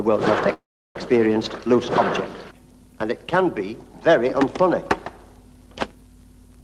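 At 0.53 s the audio stalls in a call audio freeze lasting until 0.96 s. The last sound is stretched into a brief fading buzz or hiss that decays to silence for about 340 ms. The likely cause is packets held up in transit, so the jitter buffer ran dry and the receiver padded the wait. Unlike a dropout, nothing is cut out: the sound resumes exactly where it halted, and everything after runs about 0.42 s late.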